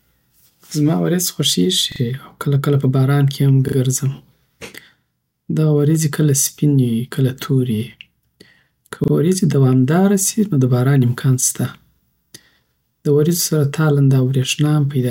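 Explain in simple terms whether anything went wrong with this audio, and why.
Short stutters interrupt the speech at 1.92, 3.68, 9.04 and 11.96 s, for example just before "او کله کله په". Each time, a tiny slice sounds three times over, or twice at 11.96 s. This is a repeated buffer: new audio arrived late, so the player replayed its last chunk, which fits a 40 ms buffer.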